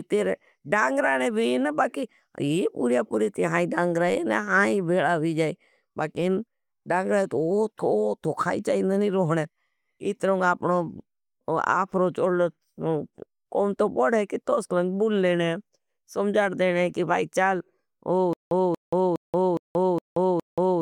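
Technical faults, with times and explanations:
18.33–20.81 s, stutter with silent gaps: a 233 ms fragment of speech repeats six times, every 413 ms, with 180 ms of silence between, likely from a stalled stream replaying its last buffer.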